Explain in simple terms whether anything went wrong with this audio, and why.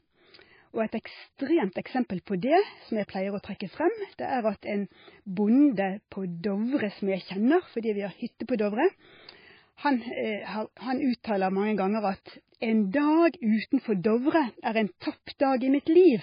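Yes, a couple of things went wrong. The whole recording has the sound of heavy MP3 compression. Nothing comes through above 5 kHz, so the speech sounds dull and muffled, and there's a watery, swirly quality around it. That's likely an MP3 encoder squeezed too hard. It drops the top end outright and lets the quieter details flicker in and out from one moment to the next, so you hear that bubbling texture.

There are also two small bits of pre-echo. The first comes right after "er en", from 15.00 to 15.02 s, and the second runs from 15.84 to 15.87 s. Each time, a short hiss of about 20 ms creeps in just before a sharp sound, which then lands a bit soft. The codec spreads its noise across a short chunk of audio, so the noise belonging to the loud attack leaks into the quiet moment before it.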